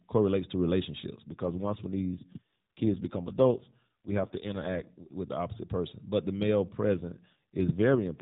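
From 1.29 to 5.14 s, and again from 6.94 s to the end, an AMR rate drop occurs, likely a step from 12.2 to 5.9 kbps, turning the speech rougher and more synthetic with no gap or band change.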